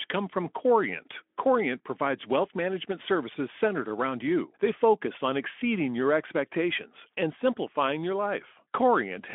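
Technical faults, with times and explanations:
No technical faults are present; the speech carries the expected Speex telephone-band character, rolling off above about 3.8 kHz.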